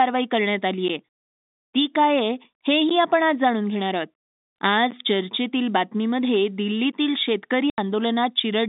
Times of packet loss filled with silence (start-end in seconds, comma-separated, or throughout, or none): 7.70-7.78